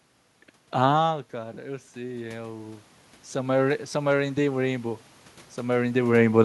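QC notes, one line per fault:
1.03–6.01 s, automatic gain rising: input falls about 14 dB as the talker moves away, so gain climbs about 11 dB, lifting voice and room noise.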